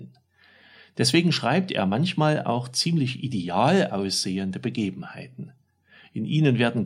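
No faults detected anywhere in the speech recording.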